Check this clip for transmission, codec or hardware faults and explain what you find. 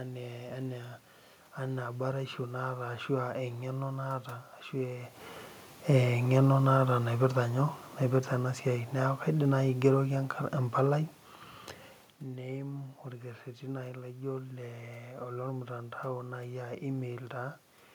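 One fault turns up in this speech recording. Automatic gain falling, from 6.55 to 8.58 s: the automatic gain control judged the input too loud or its background noise too strong and eased its gain down by about 4 dB over those two seconds, so the speech and the room background sink together. The level shifts near 5 and 12 s come from the talker moving, not the system.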